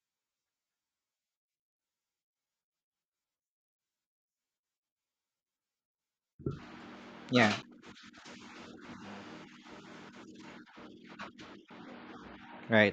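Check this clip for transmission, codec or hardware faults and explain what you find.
Two CD skips break up the speech, at 7.62 s and 11.70 s. Each is a tick with a very brief mute, a few milliseconds at most, after which the speech resumes from a different point. A knock or disc flaw made the laser jump tracks, so playback lost its place.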